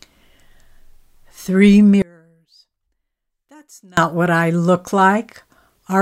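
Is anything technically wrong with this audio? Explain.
Yes. One channel inverted, 2.02 to 3.97 s: one side likely has reversed polarity, so mono summing cancels the speech, dropping it about 30 dB.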